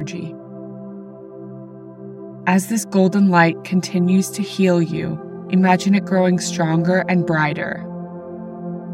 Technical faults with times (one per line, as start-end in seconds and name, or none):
0.00-8.94 channel delay (comb filtering)